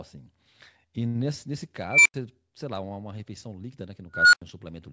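At 1.90 s a tone near 2 kHz swells over 158 ms into a loud squeal, then 85 ms of silence; at 4.14 s it recurs near 1.5 kHz over 193 ms. An unstable filter's bad recursive coefficients let its output grow until overflow cut it out.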